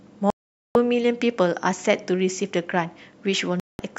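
The speech cuts to silence at 0.30 s and returns at 0.76 s, a hole of about 0.45 s. This is a digital broadcast dropout. The receiver lost good frames and muted, so that stretch of programme is gone. A second, shorter mute runs from 3.60 to 3.80 s.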